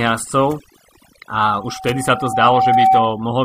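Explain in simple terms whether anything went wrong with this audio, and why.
Overdone noise removal runs through the whole clip. A noise reduction tool was pushed too hard: it shut off frequency bands it mistook for background noise, taking soft parts of the speech with them. The background drops and breaks up into twinkling specks.

Compressed frames skipped at 1.14 s and again at 2.32 s. Chunks of the compressed audio were never played, so the sound jumps ahead, by about a fifth of a second the first time and about twice that the second. Each jump fits a whole number of 23.2 ms frames.

Loudspeaker feedback squeal from 1.40 s to 3.28 s. A microphone picked up the loudspeaker it was feeding, and at 763 Hz the loop kept amplifying itself. That single tone swells over about two seconds until it is louder than the speech.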